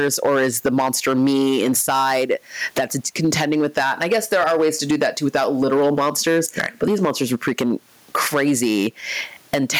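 Hard clipping runs through the whole recording. The speech drives the input stage about 14 dB past what it can pass, so the loudest peaks are cut flat. Around one sample in twenty lands on that ceiling. The squared-off tops add a spray of high harmonics, so every stressed syllable carries a harsh, buzzy fuzz instead of a clean attack, and the grit comes and goes with the loudness of the speech.

Gain pumping is also present throughout. The gain swings by around 10 dB. The room noise sits about 44 dB below the speech. The likely cause is a fast limiter or compressor clamping down on input gain set far too high. Loud and soft passages end up squeezed close together, and the delivery sounds flattened.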